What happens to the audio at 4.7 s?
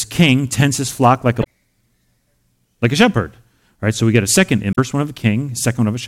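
At 4.72 to 4.78 s the speech is broken by damaged data in a compressed stream, lasting about 70 ms. Corrupted bytes there leave the decoder misreading its frames, losing sync and hunting for the next valid frame header. The result is a brief chirp, squawk, click or short hole. On a spectrogram and waveform it appears as an abrupt discontinuity in the speech.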